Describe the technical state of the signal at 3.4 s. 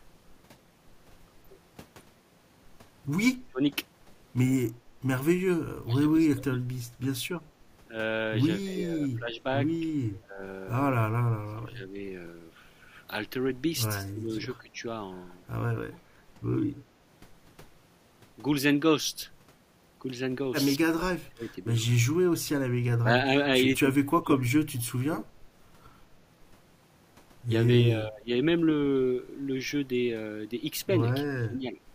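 From 3.39 to 3.62 s the speech is suppressed in double talk, dipping by around 25 dB, likely because an echo canceller muted the talker along with loudspeaker echo while both sides spoke. The waveform envelope pinches sharply, and a spectrogram shows a faded vertical gap.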